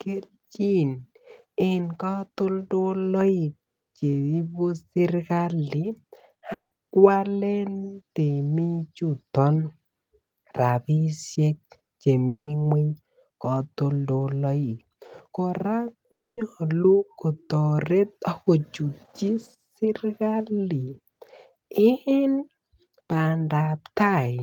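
A speech recording with a short concealed packet loss at 6.39 to 6.43 s, just after "en katoldoloik cheibuserikali", where about 20 ms of audio is replaced by a smeared continuation. Three gaps follow at 6.53 to 6.73 s, 12.27 to 12.49 s and 16.11 to 16.39 s, the last just after "katoldoloik kora". Each is likely a long network dropout: a fading buzz or hiss continuation decays into near-blank waveform and spectrogram columns lasting roughly 0.1 to 0.25 s.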